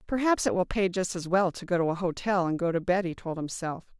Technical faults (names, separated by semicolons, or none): none